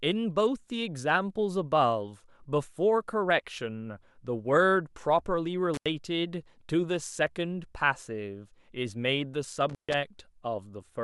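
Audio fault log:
5.74–5.86 s and 9.69–9.94 s, intermittent contact: a loose connection opens for about 85 ms and about 140 ms, so the speech drops out, leaving faint hiss, with crackle as the contact breaks and remakes. The waveform collapses to a near-flat line bracketed by sharp spikes. The spectrogram shows thin broadband vertical streaks around a dark gap.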